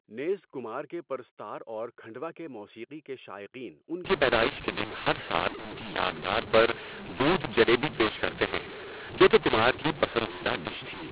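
From 4.05 s to the end, mu-law and A-law are mixed up. Mu-law speech is decoded as A-law, giving harsh distortion and hiss-filled pauses, with a lifted waveform floor and noise smeared across the spectrogram.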